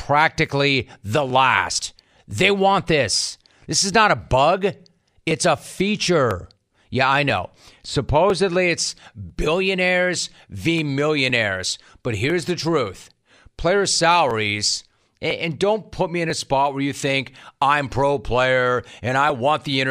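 From 0.3 s to 19.3 s, the speech carries periodic USB or driver dropouts. A tick lands roughly once every second, on a steady 1.0 s rhythm, about twenty in all. Each time, something blocks the audio path briefly. Around a millisecond of signal is skipped outright, not replaced with silence. The waveform jumps across the gap. That jump is heard as a small click or pop. The ticks show up only where speech is present.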